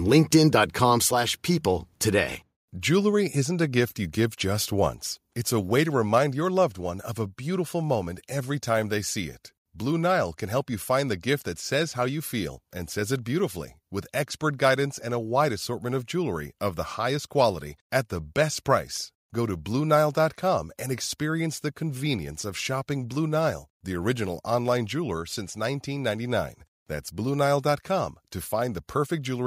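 Speech clip in which the level drops abruptly three times, by about 3 dB at 1.02 s, about 1 dB at 3.12 s and about 2 dB at 6.18 s. Voice and background fall together in a single step, which marks a microphone volume stepped down, likely by call software, rather than a gradual gain-control ramp.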